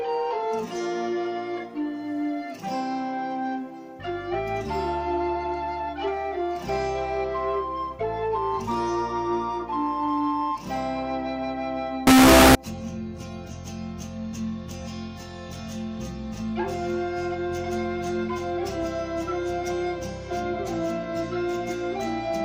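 From 12.07 s to 12.55 s the sound turns into a very loud, harsh, buzzing roar. Quiet moments blast at the same level as everything else. This is most likely a signed and unsigned mix-up, with the top bit of each sample flipped, which fits 16-bit samples. Every zero crossing becomes a jump across the full range. Plain clipping only flattens the peaks of loud passages, but here even near-silence comes out as loud as everything else.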